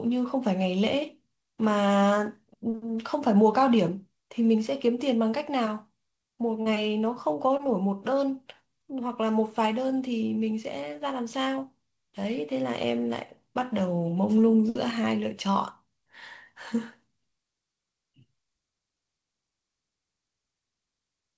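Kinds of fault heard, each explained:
Short concealed packet loss: about 40 ms of speech near 6.62 s and 20 ms near 7.57 s never arrived in time. The receiver extended the preceding sound to fill each gap, which is heard as a brief smear. A spectrogram shows smoothed, repeated patterns.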